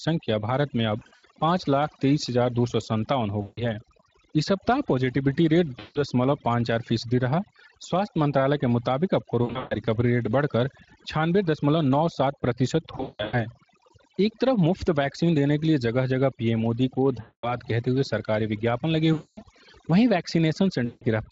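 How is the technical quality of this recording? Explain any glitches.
Technical quality is poor. Heavy processing and repeated dropouts dominate, over a Speex-coded speech path that sounds lightly compressed.

Overdone noise removal runs throughout. Aggressive spectral gating pulls bands near the noise estimate down, leaving twinkling near-silence between phrases.

VoIP packet loss concealed by the speech codec occurs at 0.99, 3.41, 5.79, 9.43, 12.97, 17.21, 19.13 and 20.85 s. The decoder extrapolates the missing audio for about 160 to 300 ms at each point, producing fading buzzy or noisy smears before the voice recovers.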